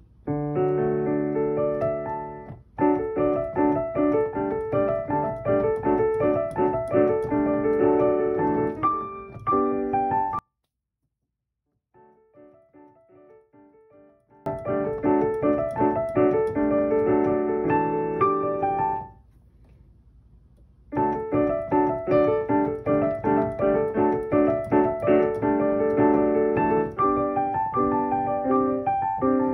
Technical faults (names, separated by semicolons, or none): one channel inverted